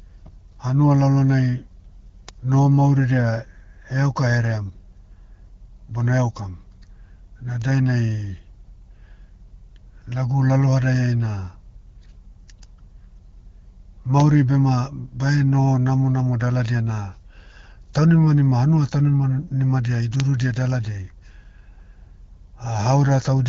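At 2.29 s a single sharp tick cuts through the speech. It is a bit error spike. One bit in one sample has flipped, so the value leaps by a power of two and snaps straight back. The tick is broadband and has nothing to do with the voice. It recurs at 7.62 s and at 20.2 s, just after "taunimanima hanua taunima nimadia". Each is one sample long, heard as the same dry click.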